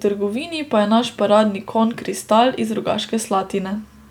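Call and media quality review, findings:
Nothing to flag here; I listened through the whole speech recording and didn't hear any faults worth a ticket.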